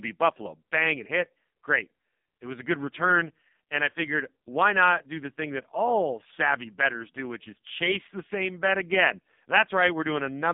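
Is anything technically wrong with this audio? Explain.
Yes. AMR narrowband mobile codec damage runs through the whole clip. Nothing above 3.8 kHz survives, and the band sits near 150 Hz to 3.7 kHz. The speech sounds heavily buzzy and synthetic, as a sparse vocal-tract model rebuilds it. That fits a low AMR-NB rate, around 5 kbps.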